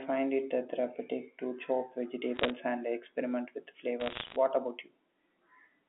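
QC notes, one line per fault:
2.36 to 2.50 s and 4.00 to 4.36 s, bit errors on a digital phone line: sharp ticks and crackle ride over the speech, denser in the second burst. Roughly 0.7 and then 1 bit in a hundred flipped on the G.711 A-law line. Each flip corrupts one sample, and hits on high bits, or on the sign of a loud sample, snap sharply.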